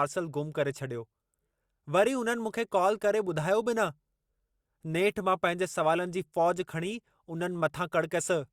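Listening to this speech recording, nothing technical stood out.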